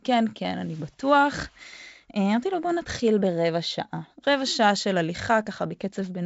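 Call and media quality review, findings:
No faults found on the G.722 wideband call.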